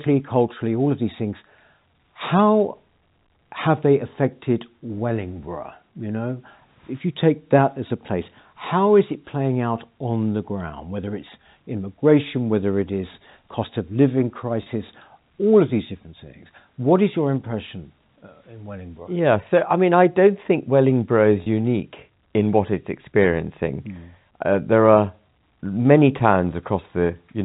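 At 14.63 s and again at 21.43 s, packet loss with pitch repetition briefly interrupts the speech. About 30 ms of audio went missing each time, which fits three lost packets. The receiver repeated the last pitch period to fill the gap. Each gap sounds like a short, slightly buzzy hold.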